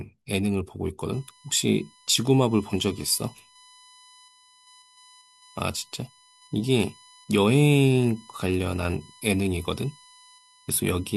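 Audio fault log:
1.13–11.17 s: USB whine. A steady tone at 1 kHz enters and stays to the end, roughly 30 dB below the speech. The bus draws current in 1 ms frames. That pulsing leaks through power or ground, producing a fixed-pitch whine at the frame rate.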